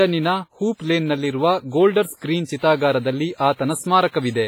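From start to finish the speech carries heavy transform-codec damage, likely WMA compression at a low bitrate, which fits something around 24 kbps. Quantisation noise is smeared across long blocks, so consonants ring and vowels sound washy, with a hiss that swells and fades with the level. On a spectrogram, weak harmonics drop out into holes and blocky patches, noise smears before and after onsets, and nothing appears above 21.5 kHz.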